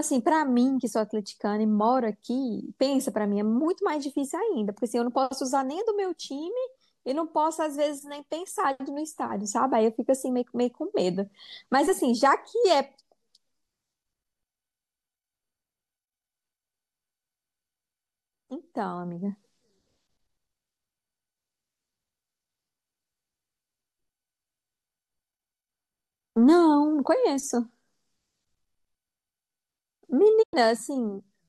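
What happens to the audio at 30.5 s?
A digital broadcast dropout mutes the speech from 30.41 to 30.55 s. The receiver lost the signal or discarded failed frames, fading out over 20 ms and losing about 96 ms, which fits four lost frames. The waveform tapers to a flat line, and the spectrogram shows a blank full-band gap.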